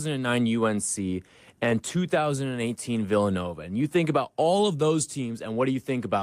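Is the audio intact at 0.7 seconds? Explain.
Yes, at 0.7 seconds the speech runs intact, with no dropout, click, distortion or other fault to be heard at that moment.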